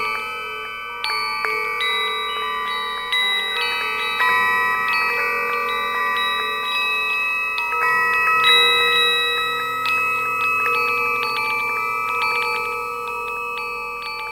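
From start to finish, a mains hum sits under the sound: a steady 50 Hz tone, around 35 dB below the signal, leaking in through a ground loop or a nearby transformer. On a spectrogram it draws an unbroken horizontal line at 50 Hz, with low harmonics stacked above.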